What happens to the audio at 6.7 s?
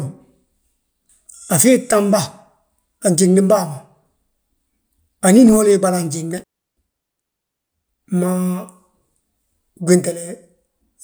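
At 6.7 s the speech is inside an intermittent contact dropout running from 6.38 to 6.77 s: a loose connection opens for about 330 ms, cutting the signal to faint hiss, with crackle at each edge. The waveform collapses to near-flat, bracketed by sharp spikes, and the spectrogram shows a gap framed by broadband vertical streaks.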